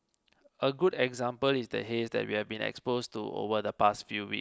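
No technical faults can be heard anywhere in the speech; the signal stays continuous and steady throughout.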